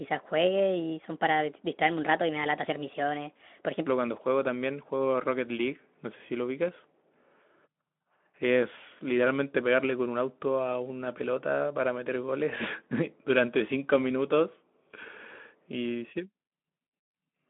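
Speech, carried over a narrow telephone-style line with nothing above about 3.8 kHz, opens with a section at the wrong speed. From 0.0 to 3.87 s the audio runs 1.28 times too fast. Pitch rises with it, by roughly four semitones. The voice sounds high and hurried. At 3.87 s speed and pitch drop back to normal together. The cause is likely a playback or editing step that ran that stretch on the wrong clock.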